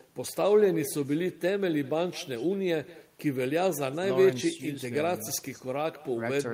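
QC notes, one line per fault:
Throughout, echo with no canceller: every phrase returns about a fifth of a second later as a thinner copy, roughly 19 dB below the speech. The far end's loudspeaker feeds its microphone and nothing removes that path before it travels back.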